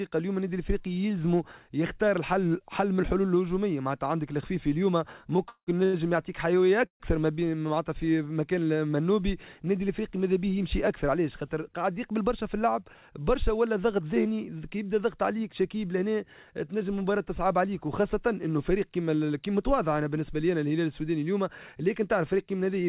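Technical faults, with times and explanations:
5.49 to 5.70 s and 6.86 to 7.03 s, call audio freeze. The sound stops, holds as a fading buzz, then about 70 ms and 100 ms of near silence. It resumes where it left off. Likely delayed packets emptying the jitter buffer.
5.85 to 5.96 s, short stall from a late packet. A sound is stretched for about 84 ms while the receiver waits. It then carries on with nothing lost.
11.42 to 13.10 s and 22.01 to 22.71 s, jitter buffer speed-up. The audio runs about 8% and 7% faster at unchanged pitch, sounding hurried. Tiny pitch-period slices are cut repeatedly to shrink built-up delay.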